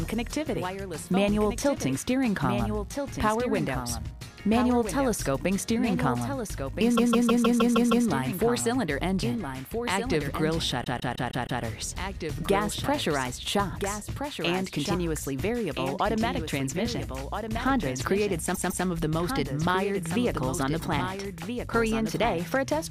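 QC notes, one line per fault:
Throughout: doubled audio track. A second full-band copy of the whole sound trails the original by roughly a second and a half, a few decibels quieter, so everything is heard twice as a distinct, dry repeat with no decay or room colour. The gap stays fixed, and the copy's level stays close to the original's, which points to the same audio being mixed in again out of step, likely from a slower second capture path.
6.96–8.06 s, 10.83–11.61 s and 18.54–18.85 s: repeated frames. The same block of about 157 ms, six frames long, plays over and over, giving a mechanical stutter: seven extra plays at the first spot, five at the second and two at the third. Compressed frames were written or sent more than once, and each run stretches the clip by the repeated time, about 1.1 s, 0.78 s and 0.31 s.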